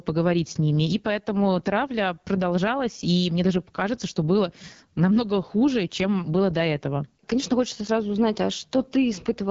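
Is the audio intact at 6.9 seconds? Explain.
No. At 6.9 seconds two faults run through the whole clip.

The first is gain pumping. The level swings by about 10 dB, lifting in the quieter stretches and dropping back on louder sounds. Soft and loud parts sit closer together, so the speech sounds squashed. The likely cause is gain set far too high for the microphone, with a fast limiter or compressor pulling it down on each loud moment.

The second is the AMR wideband (HD Voice) codec. This codec models speech up to 6.4 kHz with pulses driving a vocal tract model. It fills the band from 6.4 to 7 kHz with shaped noise. Nothing is heard above 7.5 kHz. The damage is plainly audible, which points to one of the codec's lower rates, around 8.85 kbit/s.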